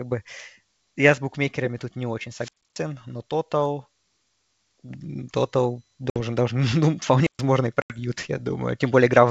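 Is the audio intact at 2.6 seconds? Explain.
No. From 2.37 to 2.81 s, after "букмекерами тут не очень" and before "но тотал", a wireless microphone squelch dropout occurs: the FM signal fades, hiss rises, and the receiver's squelch mutes the output for about 0.28 s of near silence.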